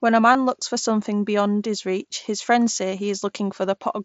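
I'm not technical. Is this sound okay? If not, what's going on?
No, there is one small glitch. At 0.34 s, the wireless link between the Bluetooth headset and the phone briefly dropped, losing roughly 15 milliseconds of audio, which points to a couple of missing packets. This is concealed Bluetooth headset packet loss: the phone fills the gap by repeating a closely matching slice of the sound just before it. Because the gap is so short, it comes across as a tiny smear or flutter rather than silence. The headset's mSBC codec adds only a faint graininess.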